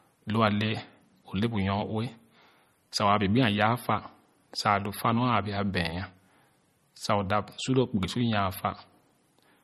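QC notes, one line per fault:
Throughout: MP3 compression, likely the cause of the plainly audible damage to this speech. Nothing sounds above 12.5 kHz, and weak frequency detail flickers in and out from frame to frame, so the sound turns watery and swirly, s sounds chirp metallically, and consonant attacks smear, which fits a low bitrate of around 33 kbps. A plain low-pass filter would dull the treble just as cleanly but leave no warbling artefacts underneath.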